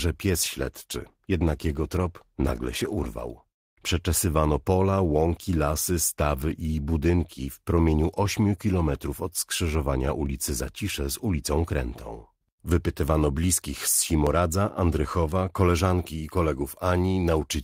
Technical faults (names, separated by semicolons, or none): call bitrate drop; periodic USB or driver dropouts